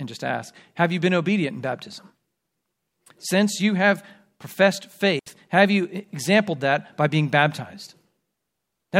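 A digital wireless dropout lost the link's data, so the receiver muted from 5.19 to 5.26 s, leaving a clean 72 ms silent hole between "you have professed" and "have you exampled that".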